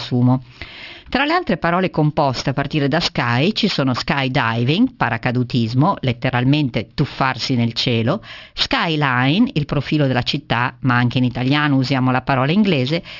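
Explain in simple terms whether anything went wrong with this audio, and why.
Yes, something went wrong. Throughout the clip the speech carries aliasing. The recording was squeezed down to a much lower sample rate, which fits a drop from 48 kHz to 12 kHz, without first removing the high sounds that rate can't hold. Anything above 6 kHz folds back down as false, unrelated tones, so s and sh sounds turn gritty and metallic. Simply cutting the highs would make the speech sound muffled instead.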